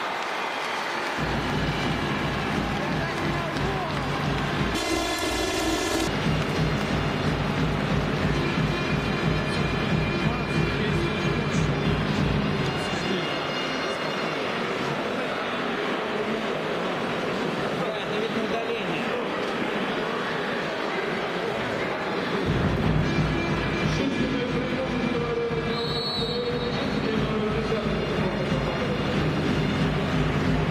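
From 4.75 to 6.08 s the sound turns into a robotic buzz near 172 Hz with no clear octave shift. This is planar audio read as interleaved: each 5.8 ms block, which fits a 256-sample block, plays twice at double speed, left then right.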